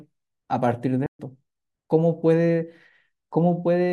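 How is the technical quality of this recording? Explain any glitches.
The speech cuts out abruptly at 1.06 s and stays silent until 1.19 s, a gap of about 130 ms, before resuming. This is a playback stall, likely caused by the player running short of buffered data or its audio thread being blocked, so output fell silent until data flowed again.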